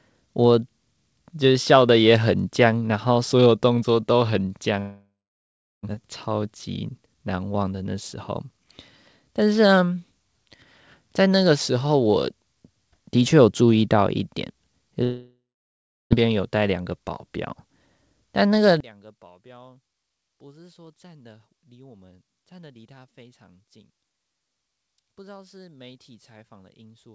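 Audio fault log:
4.80 to 6.03 s, long network dropout: about a second of audio goes missing. The last sound hangs on as a fading buzz for a bit, then roughly 0.69 s of plain silence, and the audio picks up later without the lost piece. Likely a network dropout that the receiver papered over.
6.46 to 7.15 s, jitter buffer speed-up: right after the gap, the sound runs about 7% fast with the pitch unchanged, so it feels a touch rushed. The receiver is snipping out tiny pitch-period slices, around 50 ms in total, to shrink the extra buffered delay.
15.03 to 16.25 s, long network dropout: same story again. Roughly a second goes missing, the tail smears into a fading buzz, then about 0.69 s of silence before the audio returns minus the missing bit. Likely another network outage concealed by the receiver.
16.73 to 17.27 s, jitter buffer speed-up: a second catch-up, this one about 9% fast at the same pitch, so the sound briefly hurries. 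Again around 50 ms is shaved off in small pitch-period cuts so the buffer can drain back toward its target.
18.80 to 27.14 s, one channel inverted: from here to the end the speech nearly vanishes in mono, dropping about 27 dB to a faint remnant. The likely cause is one stereo channel flipped in polarity, so the shared centre content cancels when the channels are summed.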